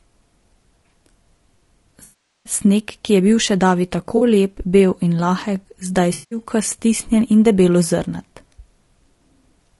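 This speech clip has passed through a low-bitrate, low-delay codec, most likely AAC-ELD at around 32 kbps. Its short analysis frames resolve the pitch harmonics poorly and leave few bits to spare, so the codec damage is plainly audible from start to finish: the voice sounds rough and grainy, with noise filling the gaps between harmonics and a top band that sounds thinned or synthetic rather than natural. In three places the decoder lost AAC frames and had to invent the missing audio from the last good spectrum, which is AAC frame loss with concealment. The longest gap runs from 2.03 to 2.52 s, about 420 ms. That is long enough that the patched stretch decays to a very faint noise floor before fading back in. A brief 40 ms gap at 4.17 s gives a short phasey blur, and a 180 ms gap from 6.13 to 6.39 s produces another noisy, washed-out patch. At 7.21 s a fraction of a millisecond of samples is missing, likely from dropped samples somewhere in the stream. 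The waveform jumps straight from one value to a later one, which is heard as a single sharp click and would appear as a thin vertical line across the spectrum. The gap is far too short to remove any of the speech itself.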